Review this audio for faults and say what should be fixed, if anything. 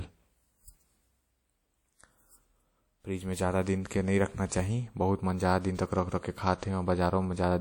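The speech was likely passed through WMA compression, with an early, simple transform encoder at a low rate that fits about 48 kbps. Throughout the clip, long blocks smear quantisation noise over tens of milliseconds, leaving a plainly audible ringing, washy sound and hiss that breathes with the speech. To prevent this, encode at a higher bitrate with a modern codec, or keep an uncompressed master.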